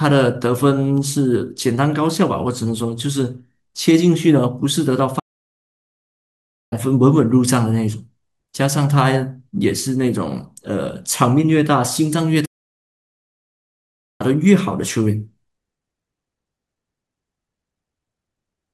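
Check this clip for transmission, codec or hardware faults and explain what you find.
Two playback stalls interrupt the speech. The first runs from 5.19 to 6.73 s, a gap of about 1.52 s, and the second from 12.45 to 14.21 s, about 1.74 s. In each case the speech cuts out abruptly in mid-flow and the output sits silent before the audio resumes. The likely cause is the player running dry of buffered data, or its output thread being held up, so nothing reached the device until it recovered.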